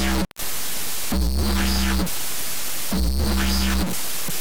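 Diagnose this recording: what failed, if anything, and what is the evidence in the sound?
A stuck bit runs through the whole recording, likely from a broken data line or converter stage. Harsh, buzzy distortion rides on the sound, and quiet passages fill with noise. On the waveform, samples jump by a fixed step near -20 dBFS, and the spectrogram shows broadband smearing everywhere.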